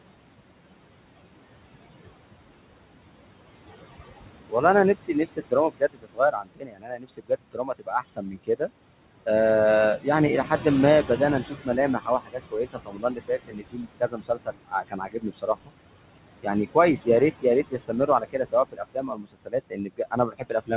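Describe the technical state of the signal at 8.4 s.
Faint, swallowed speech runs through 8.4 s: this is speech cut by the noise suppressor, which spans 4.95 to 8.71 s. The suppressor mistook quieter parts of the speech for noise and pulled them down with the background, by up to about 22 dB and for about two seconds in all.

Underneath, the background keeps sinking and swelling. These are noise suppressor artifacts, present throughout the clip. The suppressor lowers bands it judges to be steady noise by about 21 dB, frame by frame, so the noise floor follows the speech rather than staying level, all within the 4 kHz band of the G.711 call codec.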